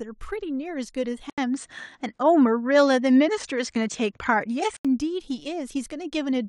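At 1.30 s there's an 80 ms gap, and then the speech turns duller and a bit boxy, with nothing above about 9.2 kHz, a level shift of roughly 5 dB and a faint new noise floor sitting well below the speech. It snaps back to the fuller sound at 4.85 s. That's the signature of the input switched to a poorer device, most likely the system jumping to a different, narrower-band mic for those few seconds.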